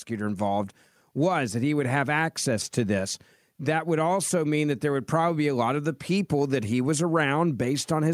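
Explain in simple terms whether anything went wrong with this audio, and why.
Automatic gain rising: from 0.08 to 1.47 s the voice and background swell together, unlike someone leaning closer, where only the voice grows.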